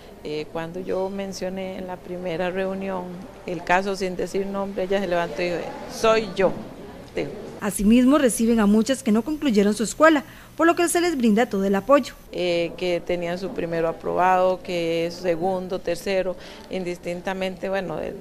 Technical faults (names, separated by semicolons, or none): sample clock jitter